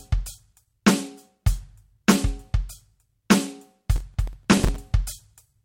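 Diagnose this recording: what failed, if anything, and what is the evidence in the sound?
Driver or buffer stage: processor overload crackle from 3.96 to 4.76 s, as about twenty roughly 5 ms buffers repeat stale music, seen as dense vertical broadband streaks.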